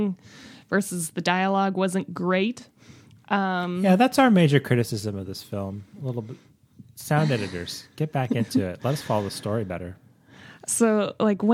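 No technical faults are audible.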